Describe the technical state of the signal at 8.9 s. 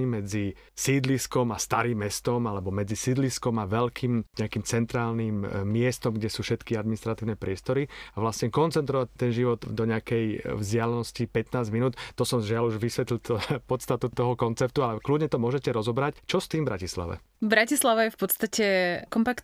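At 8.9 s the speech signal is intact, with no audible fault.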